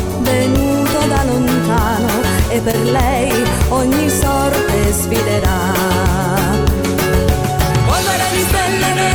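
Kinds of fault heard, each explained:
Short concealed packet loss: about 20 ms of the stream failed to reach the decoder in time at 2.71 s, and the receiver covered the gap by extending the preceding sound for roughly 16 ms, carrying its periodic structure forward or substituting shaped noise, before crossfading back into the received signal by 2.75 s. The result is a brief smeared patch lasting a few hundredths of a second rather than an outright dropout or click.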